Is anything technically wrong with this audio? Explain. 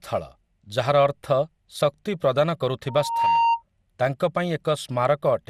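Yes, there are two faults.

Generation loss runs through the whole clip. The speech sounds swirly and hollow, consonant onsets are smeared, and nothing is present above 16 kHz. This is likely the result of lossy encoding repeated several times, perhaps four passes. The character fits MP2 at around 96 kbit/s. Each pass re-quantises on a shifted frame grid, so its noise and spectral gaps add to those of the earlier passes.

A loudspeaker feedback squeal occurs from 2.88 s to 3.63 s. A microphone is picking up the loudspeaker it feeds, and at 925 Hz the loop gain exceeds unity. That single tone swells for a little under half a second and settles at about 5 dB above the speech. It continues until 3.63 s.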